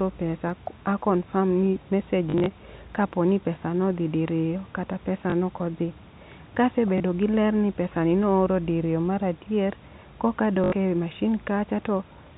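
Packet loss with last packet repeated occurs four times. Between 2.30 and 2.46 s, after "a confirm ni mesej" and before "kaponi pesa nodhi diriyo", about 100 ms is lost in scattered gaps, the longest 40 ms. Single 20 ms gaps follow at 5.30 to 5.32 s, after "nodhi diriyo kata pesa", and at 6.98 to 7.00 s, before "gi ler ni pesa". A final 80 ms gap falls at 10.64 to 10.72 s. Each gap is filled by replaying the previous packet, which fits 20 ms packets. The longer runs give a brief robotic 50 Hz stutter.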